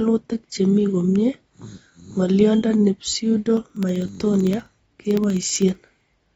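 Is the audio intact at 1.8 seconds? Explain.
No. AAC compression runs through the whole clip, so 1.8 s is affected: nothing is heard above 7.6 kHz and the speech sounds dull, smeared and fizzy, likely from a low-bitrate AAC-LC encoder starving high bands, which fits roughly 24 kbps.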